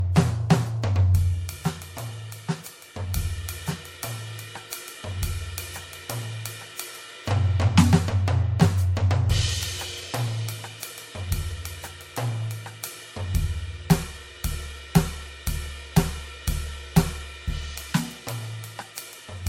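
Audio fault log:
Throughout: generation loss. The music sounds swirly, smeared and hollow, with blurred attacks and nothing above 16.7 kHz. The likely cause is about three successive MP3 encodes at what sounds like 64 kbit/s, each re-quantising on a shifted frame grid, so the damage builds up.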